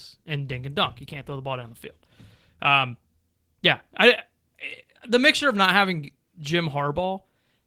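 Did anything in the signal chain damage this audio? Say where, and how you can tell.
No, nothing in the signal chain damaged this audio.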